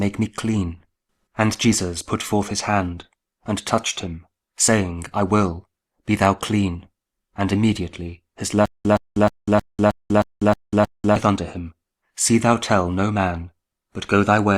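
The playback most likely stalled from 8.66 s to 11.16 s, and on each retry it replayed its last fragment before running dry, a stutter with silent gaps. The same 119 ms burst of sound comes back eight times at a steady 313 ms period, each repeat followed by about 194 ms of dead digital silence. The result is a mechanical, evenly paced chop, and whatever audio belonged in those two and a half seconds never plays.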